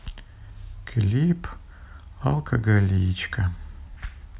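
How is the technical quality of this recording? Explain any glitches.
The technical quality of this recording is sound, with no glitches to explain.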